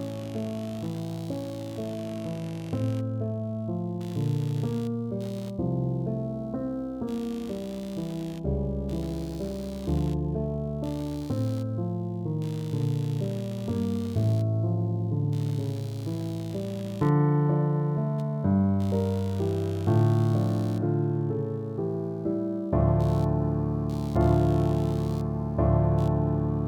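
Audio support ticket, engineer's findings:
Computer activity noise throughout. Buzzy, chirping pulses around 70 per second, roughly 25 dB under the signal. Processor or graphics load disturbing the shared ground. It varies with computer activity, not the audio, unlike steady mains hum.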